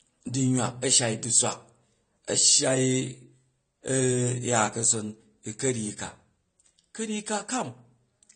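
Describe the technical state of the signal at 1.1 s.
At 1.1 s the speech is band-limited, with nothing above 9 kHz, and the damage is plainly audible here and throughout the clip. The likely cause is AAC compression at a low bitrate, consistent with around 32 kbps. The encoder quantises each frame's spectrum coarsely, lowering the cut-off and leaving gaps, so sibilants turn smeared and fizzy and sustained sounds warble. A simple low-pass filter would sound dull but clean, without that swirling texture.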